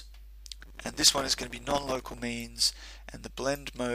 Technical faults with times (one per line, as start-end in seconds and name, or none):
0.61-2.20 processor overload crackle